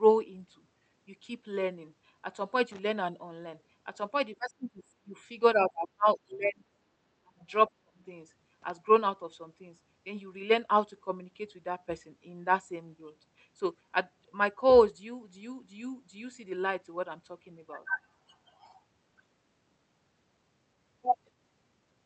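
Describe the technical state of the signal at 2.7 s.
At 2.72 to 2.79 s there's a short burst of loose connector crackle: a bad contact flickering open and shut chops the speech into a brief scratchy rattle.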